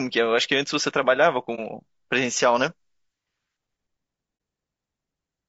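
Throughout, the speech sounds rough and grainy, with noise filling the gaps between harmonics and a thin, synthetic-sounding top band. This is likely low-delay AAC compression at a low bitrate, around 32 kbps. On a spectrogram the harmonic stripes look smeared and the upper band appears patchy. At 1.55 to 1.59 s and again at 4.37 to 4.40 s, AAC frame loss with muting opens a soft-edged gap of about one 30 ms frame. The decoder zeroes that frame and the overlapping windows fade the sound out and back in. The waveform shows a brief tapered dip, and the spectrogram shows a narrow vertical blank.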